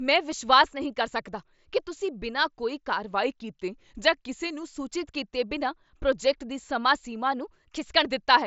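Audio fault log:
3.13–4.76 s, drift correction step: the speech slows by 5.8% and sags about 103 cents, roughly a semitone, then snaps back, likely a clock-sync resampler refilling its buffer in one jump.
7.32–8.05 s, drift correction step: right after "ਪ੍ਰੋਜੈਕਟ ਦੀ ਸਮਾਂ ਸੀਮਾ" it runs 5.8% fast and about 97 cents sharp before dropping back, likely the same sync logic draining its buffer this time.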